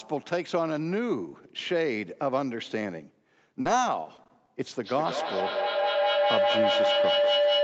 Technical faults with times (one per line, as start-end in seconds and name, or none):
3.61-3.67 short concealed packet loss
4.03-4.49 repeated packet loss (robotic sound)
4.83-7.64 feedback howl